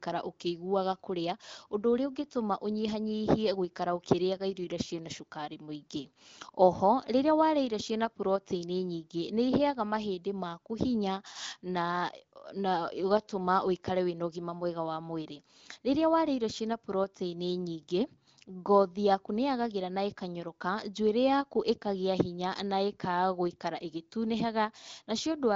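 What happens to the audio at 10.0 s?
Nothing goes wrong at 10.0 s: the speech passes through intact, with the AMR wideband (HD Voice) coding leaving at most faint traces and the band ending around 7.5 kHz.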